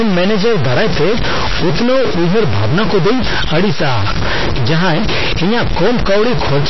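All the way through, the speech has a distorted grit and the pauses fill with noise: a stuck bit, likely one converter data line jammed. On top, MP3 compression sounds watery and swirly, with nothing above 5.8 kHz, likely from a starved encode around 24 kbps.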